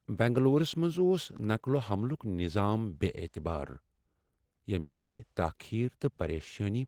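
From 4.79 s to 5.21 s the speech stalls into a fading buzzy smear, leaving about 110 ms of near-silence before resuming with roughly 400 ms missing. This is likely a long network dropout. The spectrogram shows blurred, decaying bands, then a blank gap.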